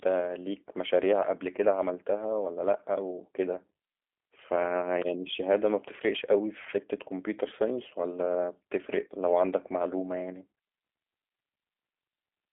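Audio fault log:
throughout, G.729 codec: the speech is rebuilt from a vocal tract filter, a pitch predictor and a sparse set of pulses per frame, which fits an 8 kbit/s G.729A link, so it sounds plainly rough and faintly synthetic. Nothing passes above 3.7 kHz, and the line band of 300 Hz to 3.5 kHz thins the lows. A spectrogram shows a hard ceiling near 3.7 kHz with smeared, blocky harmonics.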